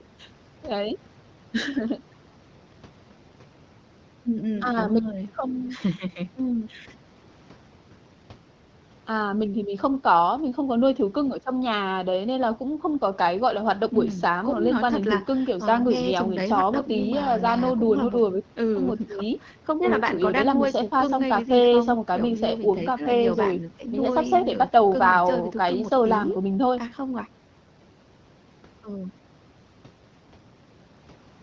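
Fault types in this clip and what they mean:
No faults turn up in this speech clip. It has passed through call microphone processing and the AMR wideband (HD Voice) codec, with nothing above 8 kHz and only light codec coloration, which fits the 12.65 kbit/s rate.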